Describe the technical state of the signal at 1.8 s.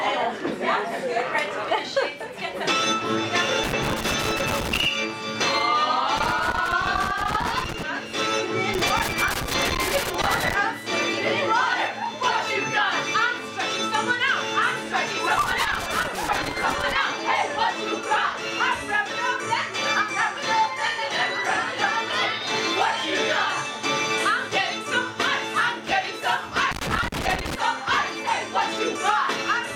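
At 1.8 s the signal is intact, with no dropout, distortion, glitch or other technical fault audible at that moment.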